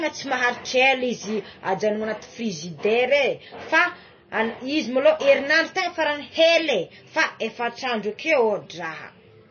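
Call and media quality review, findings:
MP3 compression, throughout the speech. Treble absent above 6.6 kHz, sibilants dulled. Watery, swirly texture; consonant onsets smeared. Likely cause: encoder starved of bits, which fits a low bitrate around 24 kbps. Weak spectral lines zeroed and toggling frame to frame, high band cut at a fixed frequency.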